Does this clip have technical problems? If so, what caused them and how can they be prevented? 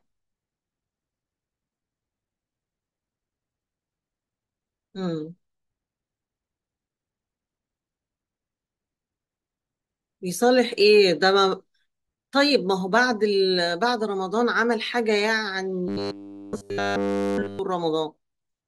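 Yes. From 15.88 to 17.59 s the speech turns into robotic sound from repeated short buffers. The voice becomes a rigid, metallic buzz fixed at 100 Hz, still loosely tracking the words. The likely cause is audio arriving too slowly, so the player loops the last chunk instead of waiting. A 100 Hz buzz fits a chunk of about 10 ms. This happens across the whole stretch, and the real audio there is lost. Larger jitter buffers or steadier delivery would prevent it.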